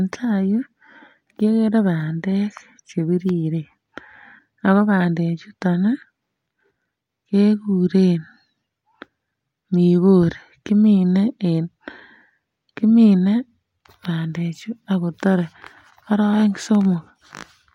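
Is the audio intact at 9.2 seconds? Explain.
Yes, the speech at 9.2 seconds is intact, with no dropout, click, distortion or other fault at that moment.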